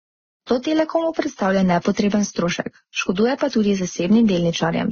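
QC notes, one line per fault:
Throughout, transcoding between lossy codecs: nothing above 6.8 kHz, with the first codec's artefacts heard together with a second codec's own coarseness. This likely comes from a low-bitrate Vorbis-style encode re-encoded by Opus, the second codec spending bits on earlier damage while adding more.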